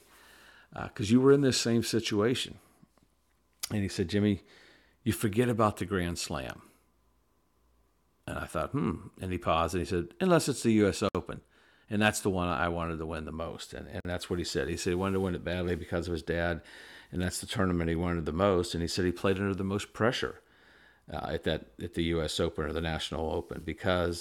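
At 11.09 s the speech drops out for about 60 ms, and at 14.00 s a second dropout of about 48 ms comes just before "that's what he said". Each is a gap at a join of encoded pieces. Separately encoded segments were butted together without trimming the encoder's start-up delay or the padding on the final frame. Each hole has its edges smeared by the codec, and the speech resumes exactly where it stopped.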